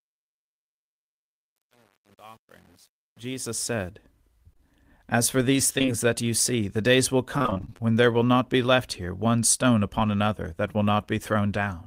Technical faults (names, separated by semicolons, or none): truncation distortion on a fade; short concealed packet loss; repeated packet loss (robotic sound)